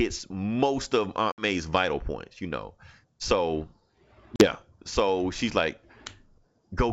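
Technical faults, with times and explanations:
1.32–1.45 s, packet loss on an ADPCM call: after "most of", about three packets (60 ms) drop to silence. The decoder's predictor and step size then lag the sender's, so the sound returns distorted before "vital points". On a spectrogram this shows as a sharp-edged blank column across all frequencies followed by smeared energy.
4.36–4.47 s, packet loss on an ADPCM call: about two packets (40 ms) go silent just before "so she's like". The waveform shows an abrupt flat gap, and the mismatched decoder state distorts the resumed sound for the rest of that span. The G.722 coding itself keeps its wideband range up to about 7 kHz.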